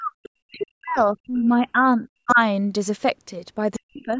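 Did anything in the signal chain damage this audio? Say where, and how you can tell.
Yes, the damage comes from call processing, in the echo canceller. The speech suppressed in double talk shows as deep dips, roughly 40 dB, from 0 to 0.28 s, from 0.47 to 2.4 s, and from 3.79 s to the end. The likely cause is that the far end was talking at the same time, and the canceller, unable to tell the talker from the loudspeaker echo, turned everything down. On a waveform the envelope collapses in chunks. A spectrogram shows the speech bands going dark in those spans.

The other side's voice leaking through appears as short scraps at 0.6–0.65 s, 0.97–1.01 s, 2.29–2.35 s and 3.74–3.79 s. They are faint, roughly 25 to 35 dB under the talker, with the 2.29 s scrap the strongest. These are likely residual loudspeaker echo that the canceller failed to remove from the microphone path. On a spectrogram they look like brief smudges of separate speech energy. 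In the waveform they are small bursts that don't follow the main talker's envelope.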